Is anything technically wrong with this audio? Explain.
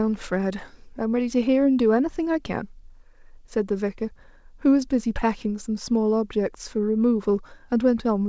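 No, nothing technically wrong.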